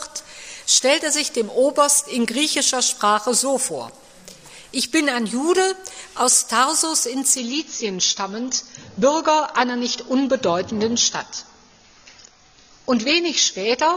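From 7.38 s to the end, an adaptive stream at a lower bitrate cuts the treble above 6.9 kHz. The drop is abrupt, with no gap, and fits a switch to a lower-bitrate AAC stream.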